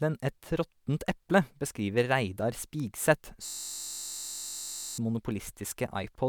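A system hang loop runs from 3.46 to 4.98 s in this speech clip: the playback system froze while the hardware kept replaying one 21.33 ms slice, which fits a 1024-sample buffer, about 70 times over, producing a steady buzz at roughly 46.9 Hz.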